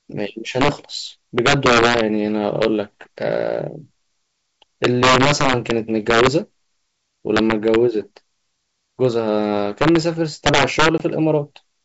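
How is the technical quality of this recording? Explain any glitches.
The recording has two clear technical faults: harsh cracks on loud passages throughout the speech, and one brief dropout near the end.

Integer overflow runs through the whole clip. Peaks pushed about 7 dB past full scale wrap to the opposite sign instead of limiting, producing violent cracks. On the waveform these appear as sudden full-range sign flips on a small fraction of samples. On the spectrogram they show as vertical broadband streaks.

Packet loss on an ADPCM call occurs from 10.98 to 11.02 s. A 20 ms gap, likely a single lost packet, is filled with silence. The decoder's predictor then briefly mismatches the sender's, so some distortion follows as it resyncs. The waveform shows a hard-edged flat hole, and the spectrogram a blank vertical band.

The wideband telephone coding itself sounds consistent with G.722 at its full 64 kbit/s rate, with content reaching up to about 7 kHz.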